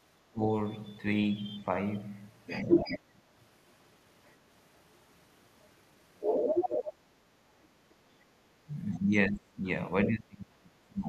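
Speech with two echo-canceller faults. Speech suppressed in double talk dips the talker's level at 0.33–0.42 s (about 15 dB), 2.66–3.21 s (about 20 dB) and from 8.66 s to the end (about 30 dB). The likely cause is the canceller ducking both voices at once, unlike a plain level fade. The other side's voice leaks through at 0.69–1.65, 2.43–2.99, 4.25–4.78, 6.2–6.94 and 7.62–7.94 s, likely as uncancelled loudspeaker echo. It is a second voice, from faint to louder than the talker, rather than a repeat of the talker's own speech.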